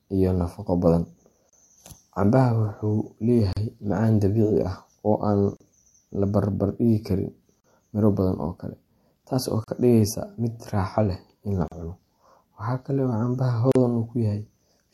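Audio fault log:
1.50 to 13.75 s, gap at a join of encoded pieces: brief silences open in the continuous speech at 1.50, 3.53, 5.57, 7.60, 9.64, 11.68 and 13.72 s, about every 2 s, the first about 34 ms long and the rest about 38 ms. Each piece was encoded on its own and butted together untrimmed, so the encoder's start-up delay and last-frame padding sit between pieces as dead air with smeared edges before the speech resumes where it stopped.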